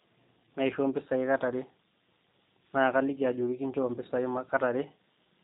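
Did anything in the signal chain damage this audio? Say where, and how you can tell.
Yes. The damage sits at the codec stage and runs through the whole speech clip. Nothing above 3.8 kHz survives, and the speech has a plainly audible rough, slightly synthetic, buzzy texture, consistent with the G.729 codec at a rate that fits 8 kbit/s. The codec rebuilds each 10 ms frame from a vocal tract filter, a pitch predictor and a few pulses rather than the original waveform. A simple telephone band-limit would only dull the sound, without that rebuilt graininess.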